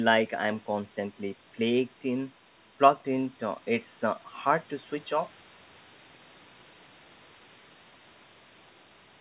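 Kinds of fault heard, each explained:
No faults are heard anywhere in this speech.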